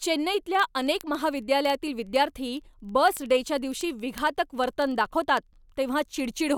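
From 0.14 to 6.57 s, word clock ticks recur roughly every 50 ms, one sample slipping each time. That steady rate, unlike random clicks, points to an unlocked clock drifting about 500 ppm.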